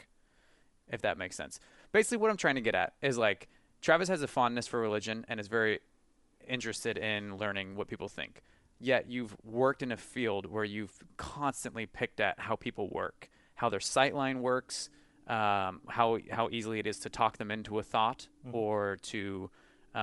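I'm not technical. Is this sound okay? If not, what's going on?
No. From start to finish the speech has a breathy, grainy edge, with a fizzy hiss where the crisp, bright parts of the sound should be. This is most likely Bluetooth LC3 compression, the squeezing that Bluetooth LE Audio earbuds and headsets apply to save space. It chops sound into very short slices, which fits 7.5 ms slices here, throws away much of the high-pitched detail, and fills the gap with noise. That filler is the hiss you hear.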